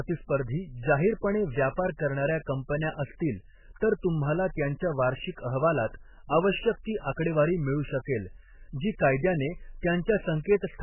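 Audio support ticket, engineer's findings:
Throughout: watery, swirly speech, nothing above 3 kHz, likely MP3 compression at a very low bitrate near 8 kbps. Spectrogram shows a hard ceiling and flickering holes where weak lines drop out.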